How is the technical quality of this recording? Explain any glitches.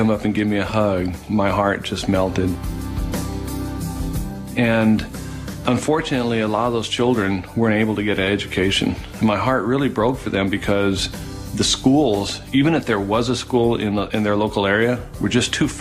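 No glitches, dropouts or distortion are audible anywhere in the recording, so there is nothing to explain.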